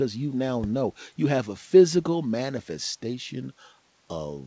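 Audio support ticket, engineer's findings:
Listened through the speech carried over the call path, band-limited at 8 kHz as that codec setup gives, and nothing stood out.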